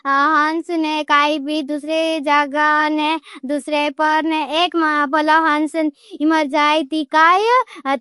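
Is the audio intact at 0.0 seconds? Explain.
No. Likely MP3 compression at a low bitrate, around 48 kbps, runs through the whole clip. Treble stops at 11.2 kHz and weak frequency lines flicker, so the speech sounds dull and watery.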